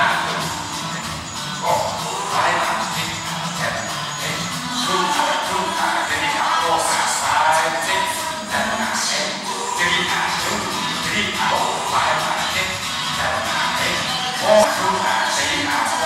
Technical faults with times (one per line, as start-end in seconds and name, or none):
11.50 damaged data in a compressed stream
14.63 damaged data in a compressed stream